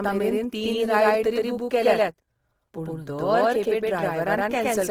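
Throughout the speech, a doubled audio track is heard: a second full-band copy trails about a tenth of a second behind at roughly equal loudness. It has no decay or room colour, which sets it apart from echo or reverb. The likely cause is a second, slower capture path or an edit holding two copies out of step.

Also throughout, the speech shows plainly audible damage of the kind left by Opus compression in its music (CELT) mode. Tones sound rough, grainy and noisy rather than swirling as MP3 would, and content reaches up to about 20.4 kHz. This likely points to a low bitrate near 16 kbps.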